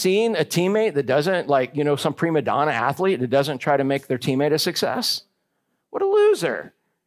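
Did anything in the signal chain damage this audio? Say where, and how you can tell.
No, nothing audible in this speech recording points to damage at any stage of the signal chain.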